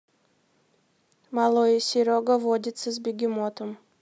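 No technical faults can be heard anywhere in the recording. The speech continues from beginning to end without any audible interruption or disturbance.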